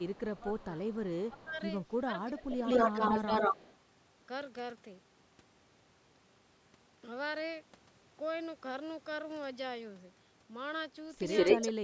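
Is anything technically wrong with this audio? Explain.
Yes. This speech clip has two kinds of fault.

Echo leak occurs from 0.00 to 1.97 s, from 2.50 to 3.75 s and from 11.36 to 11.72 s. A delayed copy of the voice trails behind it. The first copy is about 286 ms late and faint, about 25 dB down. The later two are about 166 ms late and louder than the speech itself, by about 5 dB and about 10 dB. The likely cause is a loudspeaker at the far end whose echo canceller let its own pickup return.

Speech suppressed in double talk occurs from 0.41 to 0.67 s, from 1.28 to 2.64 s and from 11.58 to 11.73 s. The main voice dips while the echoed voice overlaps it. The first two dips go about 15 dB deep. The last is milder, about 5 dB. The likely cause is an echo canceller that could not tell the talker from the echo and turned both down.

Nothing above 8 kHz is heard, which fits normal call microphone processing.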